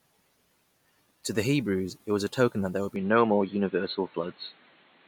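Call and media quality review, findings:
Input switched to a poorer device, 2.96 s to end, right after "token that there would". No gap at switch. Top cut above 4.3 kHz, dull boxy tone, level shifts about 5 dB, new noise floor about 40 dB down. Likely capture-path handover.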